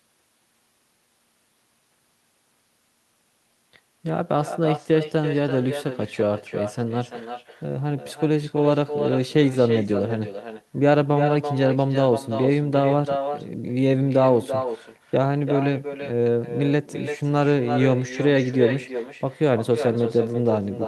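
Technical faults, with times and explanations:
Throughout, echo with no canceller: a quieter, thinner copy of the speech returns roughly a third of a second later, about 8 dB down, looped back from the far end.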